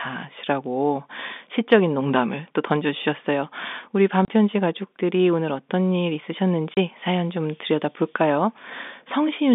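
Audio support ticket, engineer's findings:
Packet loss filled with silence, 4.25–4.28 s: speech chopped by a 30 ms hole with hard edges. The receiver is substituting zeros for missing packets, and the gap fits three 10 ms packets. Waveform shows a flat line with abrupt steps at each edge.

Same fault, 6.74–6.77 s: another 30 ms dropout with identical hard edges. Spectrogram shows a blank column across the 200 Hz–3.6 kHz G.711 telephone band.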